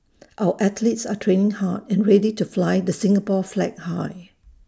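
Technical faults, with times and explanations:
Nothing wrong turns up anywhere in this bit of speech, so there's no fault to list.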